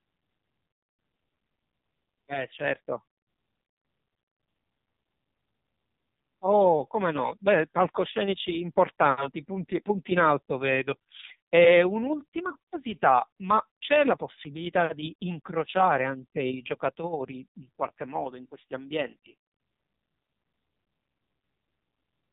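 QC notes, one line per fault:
Throughout, AMR narrowband mobile codec: the speech is confined to the telephone band, with nothing above 3.8 kHz, and heavy codec damage makes it buzzy and synthetic, which fits one of AMR-NB's low modes near 5.9 kbps. Each 20 ms frame rebuilds the voice from a vocal-tract filter fed by a few sparse pulses, so fine detail is lost. A spectrogram shows a hard ceiling at 3.8 kHz and smeared, blocky harmonics.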